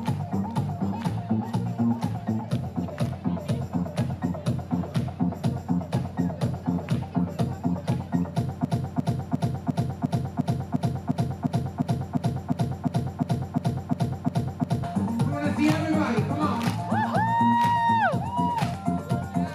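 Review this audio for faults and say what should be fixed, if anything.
Broken-record loop from 8.65 to 14.84 s: a 352 ms slice repeats 18 times, likely a stalled stream resending its last fragment, so the real audio there is lost. Worth having the playback chain catch a stall and resync or go silent instead of replaying what's in its buffer.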